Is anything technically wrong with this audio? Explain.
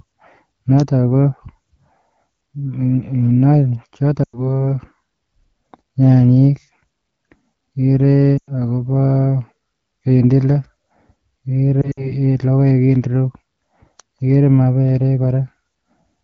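Yes. There are lost AMR speech frames at 4.24 to 4.41 s and 8.37 to 8.51 s, each about 100 ms of missing audio, and at 11.82 to 12.12 s, where about 80 ms is lost in pieces, the longest run about 60 ms. Corrupted frames failed their check, so the AMR-WB decoder, heard here with the clarity of a 12.65 kbit/s mode, repeated the last good pitch and vocal tract settings at falling gain. The speech smears and fades briefly, then returns weak or rough.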